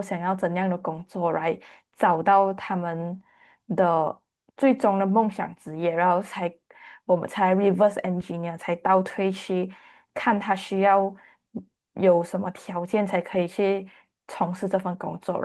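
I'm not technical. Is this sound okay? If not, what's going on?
Yes, this speech recording sounds fine, with no problems to point to. It has passed through an ordinary internet call connection, so it has the slightly reduced crispness of a call, with the very highest sounds trimmed off above about 12 kHz.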